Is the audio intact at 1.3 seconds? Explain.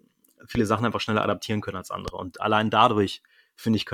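Yes, at 1.3 seconds the speech plays through cleanly, with no dropout, click, distortion or other fault at that moment.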